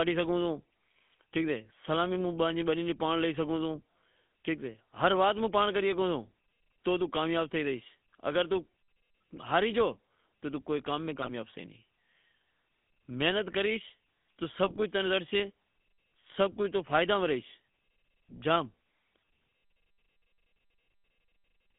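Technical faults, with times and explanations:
Throughout, GSM full-rate codec: the speech has the buzzy, gravelly roughness of the original GSM vocoder, which fits a 13 kbps stream. The codec rebuilds the voice from a vocal-tract filter excited by a sparse, regular pulse train, so voiced sounds come out grainy rather than smooth. The band runs from about 150 Hz to 3.5 kHz, which removes the low warmth and the upper sibilance and leaves the narrow, boxed-in sound of a mobile call.
9.36–9.40 s, 11.22–11.30 s and 14.64–14.82 s, GSM bit errors: the decoded speech breaks into short squawks and gargling bursts. The first two are brief, and the third lasts nearly a fifth of a second. Corrupted bits reach the decoder and scramble the filter, pitch and gain values for a few consecutive frames. For those frames the spectrum bends into unnatural shapes and the level jumps, so the voice suddenly distorts and then recovers once clean frames return.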